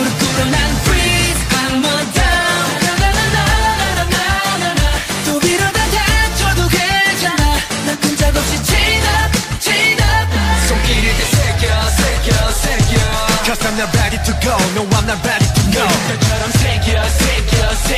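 Nothing in this recording stands out as a technical problem; the sound carries on steadily from the first moment to the last with no glitches to point to.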